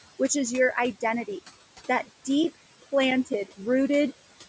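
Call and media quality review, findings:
Overdone noise removal, whole clip. Background collapses to near silence with twinkling specks. Noise reducer set too strong, zeroing bands near its noise estimate, taking quiet speech detail. Spectrogram: isolated bright dots scattered across an otherwise black floor.

Noise suppressor artifacts, throughout. Residual noise drops about 17 dB between phrases and swells back under speech. Per-frame gain on bands judged steady noise. Spectrogram: noise floor pumping with speech energy, blotchy texture; waveform floor rising under syllables.

CD scratch ticks, 1.54 to 3.78 s. Eleven regular ticks, roughly five per second, each around 10 ms at most. Disc blemish exceeding error correction once per revolution; player interpolates or mutes samples. Waveform: evenly spaced spikes or notches; spectrogram: thin vertical broadband lines.

Band limit at 8 kHz from call microphone processing and room noise about 18 dB below speech are expected, not faults.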